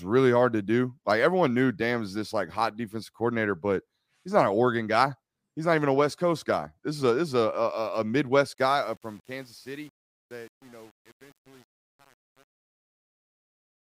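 From about 8.54 s the speech starts fading out, running to around 13.9 s. The trouble is truncation distortion on the fade. The gain stage drops the level without dither and keeps too few bits, which fits an 8-bit path. From roughly 8.66 s to the end at 13.95 s, the shrinking waveform collapses into coarse steps, so the tail turns gritty.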